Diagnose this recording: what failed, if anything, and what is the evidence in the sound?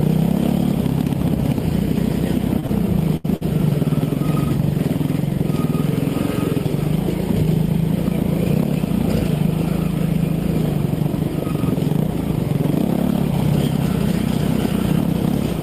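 A held, slightly buzzy smear of the sound appears at 2.59 to 2.65 s, 2.67 to 2.70 s, 3.17 to 3.26 s and 3.36 to 3.43 s, stretched by 32, 15, 75 and 50 ms. These are short stalls from late packets at the network stage: the jitter buffer emptied and the receiver held the last audio until each packet arrived, so nothing is lost.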